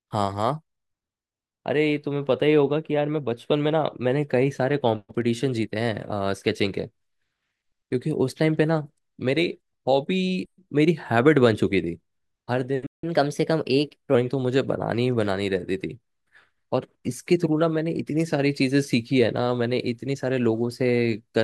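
A playback stall at 12.86 s cuts the speech to silence for about 0.17 s, likely because the player ran short of data or its thread was blocked. Catch-up at higher speed follows from 13.04 to 14.15 s: the player resamples its backlog at 1.15 times normal speed, lifting pitch by about two semitones until it settles back.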